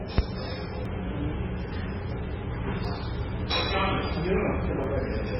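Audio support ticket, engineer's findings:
Heavy MP3 compression likely. Whole clip. Treble cut hard at 5.6 kHz, watery swirl throughout. Sound fits a very low bitrate, near 16 kbps.

Audio missing between chunks likely. Short skips at 0.85 s, 2.85 s, 4.84 s, every 2 s. A few milliseconds dropped at each chunk boundary, ends joined without silence.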